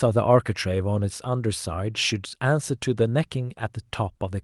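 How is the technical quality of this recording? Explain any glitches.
No glitches or dropouts can be heard anywhere in the speech. The audio has come through a WebRTC call path, and its high end stops at 12 kHz, which points to the Opus codec working as intended.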